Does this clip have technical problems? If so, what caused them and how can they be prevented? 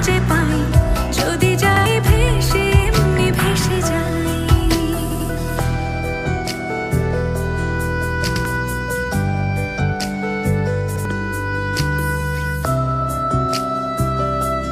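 Yes. A repeated buffer stutters the audio at 1.77, 5.11, 8.36 and 10.96 s. New audio arrived late, so the last 93 ms block, which fits a 4096-sample buffer, played again, and twice more at 5.11 s. Waveform and spectrogram show identical adjacent blocks split by hard vertical seams. A larger playback buffer prevents it.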